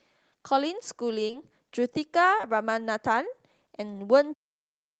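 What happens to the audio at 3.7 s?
Nothing goes wrong at 3.7 s; the audio is intact there.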